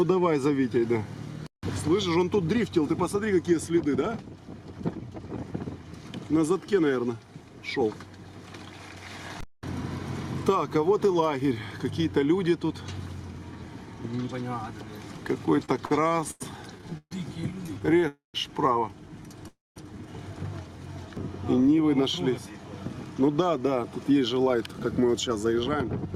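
Packets arrived late or too slowly, repeatedly draining the jitter buffer, causing repeated stalls (stutter) from 15.65 to 16.42 s, 16.78 to 17.13 s and 17.67 to 18.04 s. The last sound is stretched through each gap, so the audio drags and stutters without losing anything.

At 18.08 to 18.36 s and 19.48 to 19.78 s, a call audio freeze, likely from held-up packets emptying the buffer, makes the sound continue, fade, and go silent for roughly 0.14 s and 0.19 s before resuming where it stopped.

From 23.21 to 25.85 s, a jitter buffer speed-up trims short pitch-period pieces to shed about a fifth of a second of excess delay, so the audio runs at 108% speed with unchanged pitch and sounds hurried.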